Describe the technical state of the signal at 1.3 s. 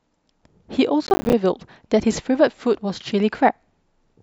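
At 1.3 s the speech is near the end of a burst of processor overload crackle that runs from 1.07 to 1.33 s. The processor is failing to deliver its audio buffers on time, and each missed deadline drops a short stretch of silence into the signal. The gap sizes suggest buffers of around 10 ms, with about fifteen of them missed. The result is a gritty, tearing crackle. On the waveform it appears as repeated flat dropouts with sharp edges. On a spectrogram it shows as thin vertical broadband streaks.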